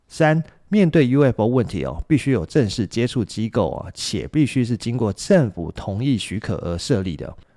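No technical faults are audible anywhere in the recording.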